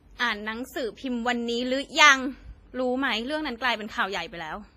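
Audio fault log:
Throughout: WMA compression. The speech rings and sounds washy, with a hiss that swells and fades with each syllable. Quantisation noise from long transform blocks spreads over tens of milliseconds, and weak spectral lines are dropped to zero. The heavy damage fits a low bitrate near 24 kbps, likely from an early WMA encoder. A spectrogram shows nothing above 15.5 kHz, patchy holes between harmonics and smearing before onsets. The waveform looks fuzzy around transients.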